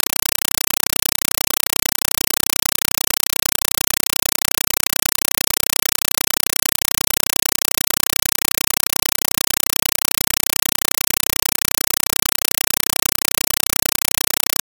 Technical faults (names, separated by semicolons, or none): compressed stream played as audio